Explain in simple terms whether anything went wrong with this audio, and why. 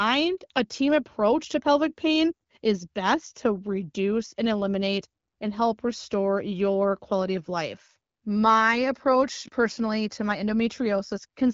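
No, nothing went wrong with this speech recording.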